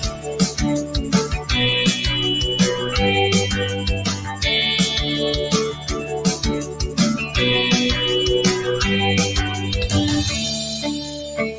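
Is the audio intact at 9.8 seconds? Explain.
No. At 9.8 seconds, as throughout the clip, a noise suppressor applied to music or sounds is at work. Built for speech, it treats sustained tones and decaying tails as noise and pulls them down by around 10 dB, while onsets get through. The sound pumps and thins as held parts sink. On a waveform, the envelope dips just after each attack. On a spectrogram, sustained bands fade and flicker under a top edge near 8 kHz from the call processing.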